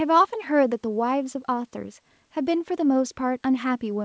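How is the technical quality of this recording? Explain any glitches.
The technical quality of this speech recording is good, and there are no glitches to explain.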